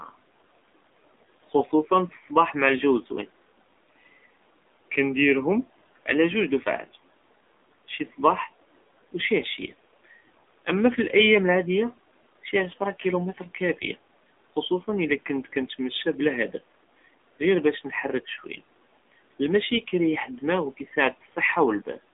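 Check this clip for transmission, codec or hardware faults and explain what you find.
The speech carries one codec fault throughout. An AMR narrowband mobile codec limits the line to 250 Hz to 3.6 kHz, with nothing above 3.7 kHz. Its pulse-driven vocal-tract model leaves plainly audible buzzy, synthetic damage, which fits a low 7.4 kbps mode. The room noise sits about 22 dB below the speech.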